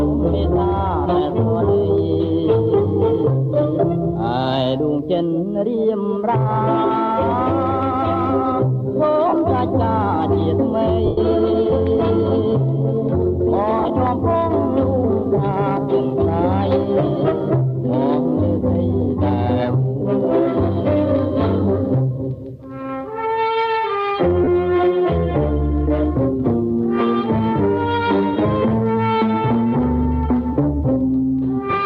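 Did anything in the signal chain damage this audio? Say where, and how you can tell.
Yes, there are lost LE Audio frames on the Bluetooth link, and the LC3 decoder is papering over the gaps. Listen at 9.28 to 9.36 s (about 60 ms lost in bursts, the longest around 50 ms), 11.06 to 11.18 s (one solid 110 ms hole), 13.79 to 13.90 s (short dropouts scattered across about 105 ms) and 24.44 to 24.47 s (30 ms). The decoder repeats the last spectrum with random signs, so tonal content turns into a noisy smear, and in the long 11 s gap it fades toward silence. The gap lengths fit 7.5 ms frames.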